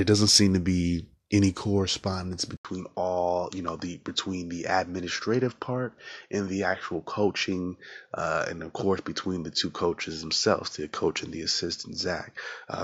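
A speech recording whose sound changes abruptly at 2.57 s, right after "to be any correspondence": an 80 ms gap of silence, then the audio turns duller for the rest of the clip, with nothing above 7.4 kHz, a faint new background noise roughly 50 dB under the signal, and no real change in loudness. The likely cause is an input switched to a poorer device partway through, whose narrower band and own noise floor replace the original microphone's.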